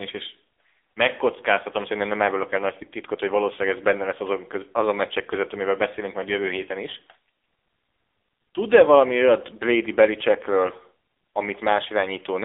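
AMR narrowband mobile codec damage runs through the whole speech clip, from start to finish. The audio has been squeezed through an 8 kHz telephone-grade coder that rebuilds the voice from a vocal-tract model excited by sparse pulses. Nothing survives above about 3.7 kHz, and the usable band sits roughly between 300 Hz and 3.6 kHz. The codec damage is heavy: a buzzy, synthetic edge that fits a low mode around 6.7 kbps.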